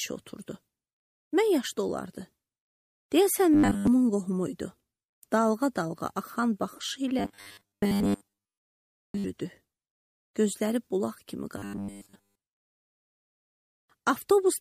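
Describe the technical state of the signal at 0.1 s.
At 0.1 s the signal is intact, with no dropout, distortion, or other fault audible at that point.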